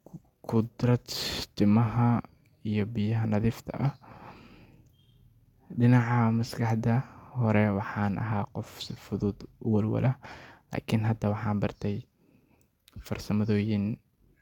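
Nothing to flag: no audible technical faults at any point in the speech.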